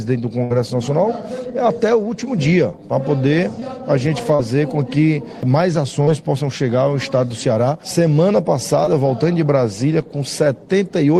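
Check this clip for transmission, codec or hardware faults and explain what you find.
Two kinds of network fault are present: one burst of packet loss near the start and four short concealed packet losses later on.

The burst of packet loss runs from 0.43 to 0.52 s. About 60 ms of audio failed to arrive in time, and the receiver extended the preceding sound for about 65 ms while fading it down. The result is a held, decaying tail, buzz-like or hiss-like depending on what came before, followed by a jump where the audio resumes with that stretch absent.

Short concealed packet loss occurs at 3.60 to 3.63 s, 4.35 to 4.41 s, 6.05 to 6.09 s and 8.85 to 8.88 s. Each gap is 20 ms, or 40 ms in the 4.35 s case. The decoder bridged each one by continuing the last signal for roughly 15 to 35 ms before crossfading back into received audio. These are heard as brief smears or wobbles, the 4.35 s one being the longest.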